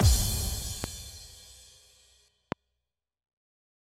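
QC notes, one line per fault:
0.84–0.86 s and 2.52–2.54 s, loud pop: two single sharp pops, each about 15 dB above the surrounding sound, which continues underneath. A likely cause is a voltage pulse from a switch, plug or static. They appear as tall narrow waveform spikes and thin full-height vertical lines on a spectrogram.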